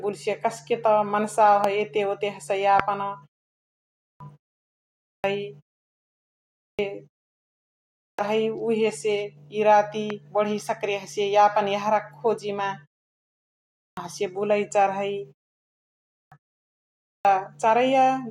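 A sharp loud pop cuts through the speech at 1.64 s, about 15 dB above it, and a harder one follows at 2.80 s, about 20 dB up. Each is a single click while the speech carries on beneath. The likely cause is a brief voltage spike from a switch, static or a driver glitch, shaped by the downstream circuitry into a click.

From 3.59 s the speech begins lopping off the opening of each phrase that follows a pause. This clipped start after a pause recurs at 4.66, 6.17 and 7.59 s, with roughly 0.58 to 0.62 s swallowed each time, so speech jumps in abruptly out of silence. The pauses before them last only 0.37 to 0.64 s, yet the output device drops into sleep and needs over half a second to wake and lock again.

Another pop, softer at about 10 dB, lands at 10.10 s, just before "बढी सकरैया हसिय".

The clipping returns at 13.32 s, removing about 0.65 s before "हसिय बुलाई चारहै", and again at 15.75 and 16.64 s, each losing close to 0.6 s. 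The wake-up lag is what eats those openings.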